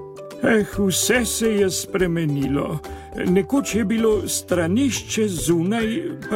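No technical faults can be heard anywhere in the clip. Nothing in the sound calls for comment.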